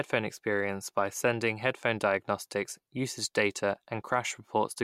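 No technical faults are audible.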